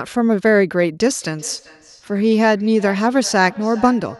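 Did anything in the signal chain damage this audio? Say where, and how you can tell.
Yes. From 1.22 s to the end, the speech returns at a steady spacing of roughly 0.4 s, peaking about 21 dB below the direct speech. That is feedback echo between two devices at the call-processing stage. A second device in the room plays back this microphone's signal, and the microphone picks it up again. Each echo canceller removes only its own device's output, so the loop survives. On a spectrogram, faint copies of each syllable's harmonics trail the original at that regular offset.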